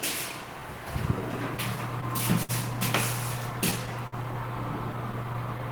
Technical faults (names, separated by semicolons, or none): clock drift between sender and receiver; scattered short gaps